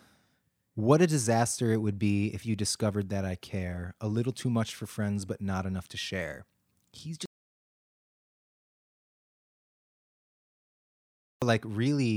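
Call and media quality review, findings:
Input path loss, likely a disconnected capture device, dropped link or stray mute, while the encoder kept writing silence. Audio dropout to silence from 7.26 s to 11.42 s. Speech cuts off mid-flow, then about 4.16 s of silence with no room tone, and resumes abruptly. Content in the gap is unrecoverable.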